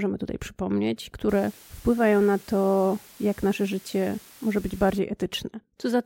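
From 1.29 s to 4.99 s, just after "tutaj przypomnieć", a constant, even hiss sits under the speech, about 25 dB below it, with no distortion or grittiness on the voice itself. This is low bit depth with dither: the signal was reduced to about 7 bits, and random dither was added before rounding, so the quantisation error turns into steady white noise rather than distortion that follows the speech.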